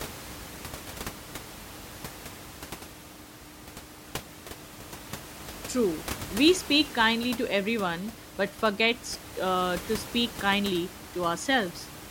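No technical faults can be heard anywhere in the speech. The room noise of the recording space sits beneath it, about 15 dB below the speech level.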